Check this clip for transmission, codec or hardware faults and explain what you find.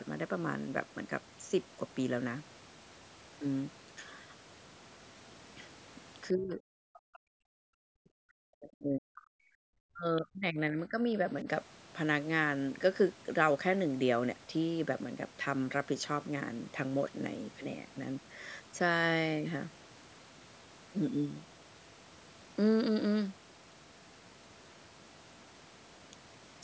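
Two echo-control faults are present in this speech: speech suppressed in double talk, and the other side's voice leaking through. Both sit between roughly 6 and 11.5 seconds.

Speech suppressed in double talk occurs three times. From 6.31 to 9.61 s, the talker's level falls sharply, by around 40 dB at its deepest, over about three seconds. From 9.92 to 11.16 s it dips again, by around 30 dB, for roughly a second. At 11.43 to 11.47 s there is a brief dip of a few decibels. The likely cause is the echo canceller meeting simultaneous talk from both ends. Unable to separate the loudspeaker echo from the local talker, it attenuated the whole microphone signal, so the voice ducks and partly drops out.

The other side's voice leaking through appears from 10.17 to 10.21 s, inside the second suppressed stretch. It is a short, faint scrap of a second voice, around 25 dB below the talker. This is likely residual loudspeaker echo that the canceller failed to subtract from the microphone pickup.

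The call's microphone processing band-limits the signal, with nothing above 8 kHz.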